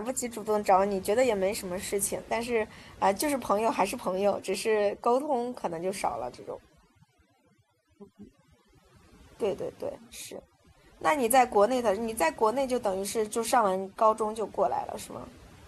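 A speech recording runs for about 16 seconds with overdone noise removal present from start to finish. The noise reduction was set too aggressively, so individual frequency bands sitting close to the estimated noise floor are pulled far down or gated off entirely, taking the quieter components of the voice with them. The pauses collapse to near silence scattered with twinkling, chirpy specks.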